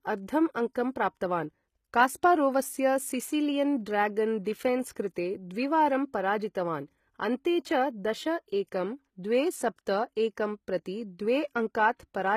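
The whole clip has a plainly audible codec sound: treble that's bright but not quite right, with gritty, lispy s sounds and nothing above 14.9 kHz. That's likely HE-AAC compression rebuilding the top end by copying lower bands upward, which fits a very low bitrate around 20 kbps.

At 4.44 s and again at 4.95 s there's pre-echo. A short hiss of about 16 ms and 14 ms creeps in just ahead of a sharp attack, because the codec's block noise leaks into the quiet moment before it. The onsets sound softened and smeared.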